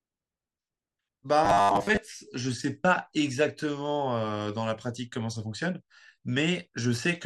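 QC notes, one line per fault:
1.45–1.98 s: robotic sound from repeated short buffers. The speech becomes a rigid metallic buzz locked at 100 Hz. That points to a roughly 10 ms slice being looped while most of the real audio is skipped, likely because new audio arrived too seldom.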